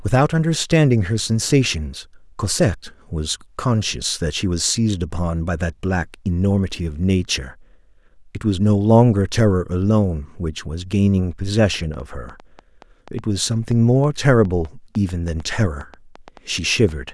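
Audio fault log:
11.74–17.10 s: train of clicks, about twenty similar pulses at an uneven 4.3 per second, roughly as loud as the speech, likely from nearby interference or a faulty connection.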